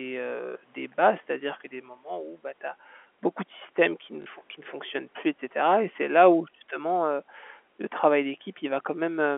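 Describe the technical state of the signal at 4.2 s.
From 4.22 to 4.26 s there is packet loss with the last packet repeated. A 40 ms gap is filled by replaying, likely of 20 ms packets, giving a robotic stutter.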